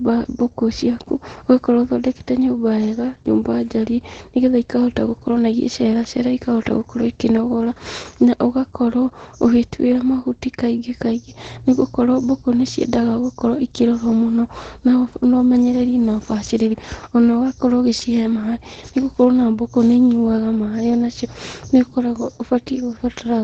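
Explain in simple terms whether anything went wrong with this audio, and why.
Opus voice compression squeezed the speech from start to finish, discarding everything above 9 kHz and coding the voice coarsely, so it sounds muffled, hoarse and slightly robotic.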